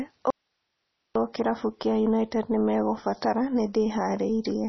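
From 0.30 s to 1.15 s the speech drops out abruptly for about 850 ms, leaving only hiss at about 50 dB below the speech level. This is an audio dropout to a faint residue, likely the wanted signal lost while the path after the break stayed live. The hard edges and the hiss in the gap set it apart from a natural pause or a fade.

Throughout the clip there is nothing above 5.9 kHz, and the speech has a watery, swirling texture. That points to heavy MP3 compression at around 24 kbps. The encoder cut the treble and let weak frequency lines flicker from frame to frame, which a plain low-pass filter would not do.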